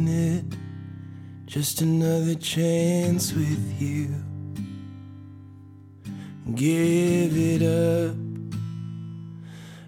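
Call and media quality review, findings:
Single sharp click at 1.84 s. Likely dropped samples in the capture or buffering path: a fraction of a millisecond of audio is skipped, so the waveform jumps straight to a later value. On the spectrogram there is one thin vertical line spanning all frequencies, and the waveform shows a step discontinuity. No audible gap.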